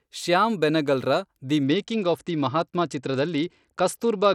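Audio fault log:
1.63–4.34 s: Bluetooth SBC bit pool drop. The link starved the encoder of bits, which fits a bit pool falling from 31 to 10 at roughly 77 kbps. Upper sub-bands go empty and the rest are coarsely quantised, so speech dulls and turns gritty through the end.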